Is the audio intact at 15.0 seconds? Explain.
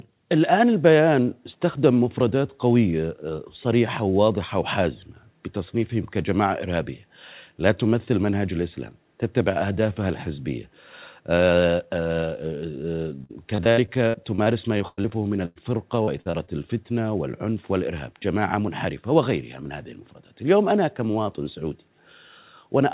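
No, 15.0 seconds falls inside a burst of repeated packet loss (robotic sound) running from 13.24 to 15.58 s. Packets kept going missing or arriving late, a dozen or so holes, the longest about 102 ms. Each gap was papered over by stretching the last bit of audio, so roughly a quarter of that stretch is concealment rather than real signal. It comes out choppy and robotic, with pieces dropping out, on top of the narrowband G.711 call sound that stops at 4 kHz.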